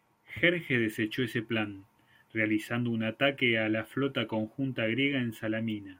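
No technical faults are audible.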